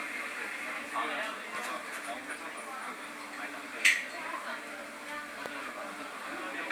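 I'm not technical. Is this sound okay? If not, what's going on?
No, there are two loud pops: a sharp click from 1.55 to 1.57 s and a stronger one from 5.46 to 5.48 s, with the sound carrying on underneath. The likely cause is a brief electrical jolt, such as a cable, switch or static, getting into the signal.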